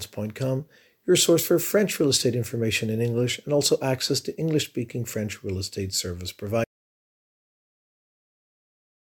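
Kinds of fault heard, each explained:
Audio dropout to silence: The speech cuts off abruptly at 6.64 s and never returns. The final 2.5 seconds are silent, with no room tone at all. The input was likely lost while the recording kept writing silence.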